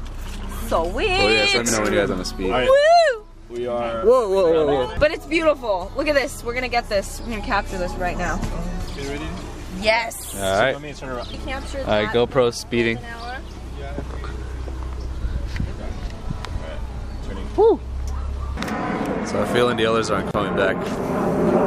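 At 20.31 s the audio drops out for about 33 ms, resuming at 20.34 s. This is a gap at a join of encoded pieces: the material was encoded in separate segments and concatenated without trimming, so the encoder's start-up delay on one piece and the padding on the final frame of the previous piece both remain as silence. The result is a brief hole in otherwise continuous sound, with abrupt edges softened by the codec, after which the audio continues from where it stopped.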